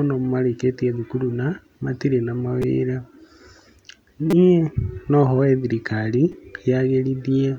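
At 2.62 s, 4.31 to 4.33 s and 6.32 s there's a repeated buffer: audio arrived late, so a roughly 5 ms chunk replayed several times, giving a brief buzzy stutter.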